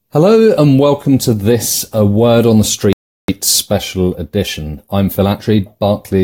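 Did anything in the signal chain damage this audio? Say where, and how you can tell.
Yes. A rebuffering stall at the playback stage interrupts the speech from 2.93 to 3.28 s, right after "on the", with "special edition I'm" following. The player's stream ran dry, so output fell to silence for about 0.36 s until more data arrived. It then resumed exactly where it left off. That continuity separates it from a network dropout or packet loss: no syllable is clipped or missing, and the gap only adds time.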